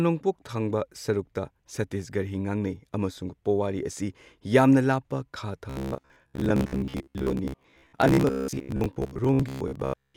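Speech, and from about 5.70 s right through to 10.16 s it collapses into robotic sound from repeated short buffers. The voice becomes a stiff, metallic buzz pinned at roughly 66.8 Hz, still loosely tracking the speech rhythm. That pitch matches a chunk of about 15 ms being looped, which points to audio likely arriving too slowly and the playback filling the gaps by repeating the last buffer. Around half the material seems to be repeats rather than fresh audio.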